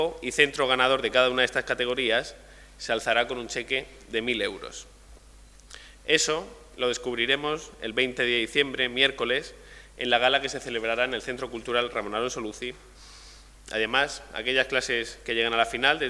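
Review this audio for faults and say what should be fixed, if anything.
Nothing in this audio needs fixing, as no faults can be heard.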